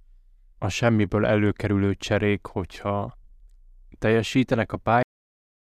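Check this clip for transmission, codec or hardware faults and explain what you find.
One fault is present: a cut-off end. At 5.03 s, right after "teljesítenek a", the speech stops mid-sound and falls straight to digital silence, which holds for the remaining 0.8 s or so. The final stretch of audio was never written out or played, so the sound is severed rather than finished. Unlike a natural ending or a fade, there is no decay or room tail, and unlike a mid-clip dropout, the audio never resumes.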